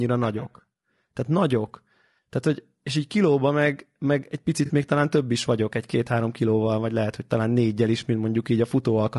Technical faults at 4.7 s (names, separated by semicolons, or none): low-delay AAC compression; AAC frame loss with concealment